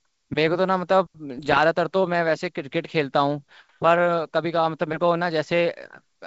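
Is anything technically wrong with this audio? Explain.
Yes. Bit errors on an ADPCM link, from 1.38 to 1.59 s. A small fraction of the bits in this stretch of the 64 kbit/s G.722 stream were flipped. Each error corrupts the decoder's step size and predictor, so the fault rings on briefly. It is heard as pops and rough bursts with sudden level jumps, spread across what sounds like about a dozen frames.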